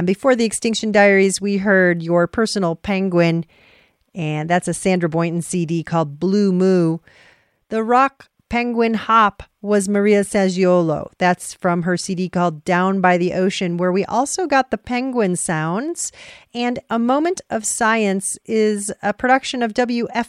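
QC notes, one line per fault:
Nothing stood out on listening to this speech clip.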